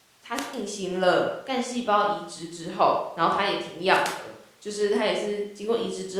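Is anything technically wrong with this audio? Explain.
Yes. Wireless microphone squelch dropouts occur at 0.34–0.56 s and 3.90–4.12 s: the radio link fades, hiss rises, then the receiver mutes for 145 ms and 94 ms respectively.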